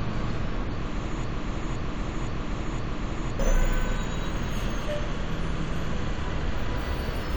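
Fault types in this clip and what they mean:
Broken-record loop: Most likely the player, encoder or stream stalled and kept resending the last fragment it held instead of fresh material. From 1.24 s to 3.40 s, a slice of sound about 0.52 s long plays four times back to back, each pass identical, so the passage stutters in a fixed rhythm. Whatever should have sounded during those two seconds is missing, and the audio jumps ahead when normal playback resumes.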